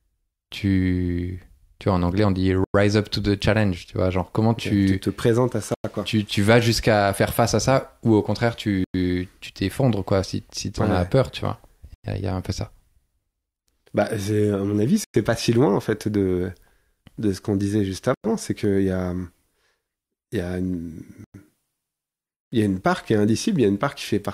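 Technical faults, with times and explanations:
2.64, 5.74, 8.84, 11.94, 15.04, 18.14 and 21.24 s: gap between chunks. The speech stops dead for 100 ms at each of these times. The holes have hard edges and come every 3.1 s. This points to the audio being delivered in 3-second chunks with silence inserted at each join. No speech is lost. It is only interrupted. Gaps fall right after "te présentes à ça" and "as peur tu vois", and between "ce qu'on disait juste" and "c'est qu'il y a".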